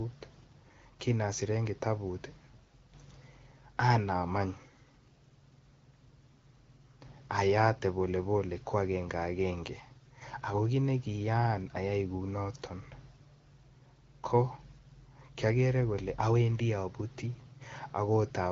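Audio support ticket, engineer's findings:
No faults found in this clip.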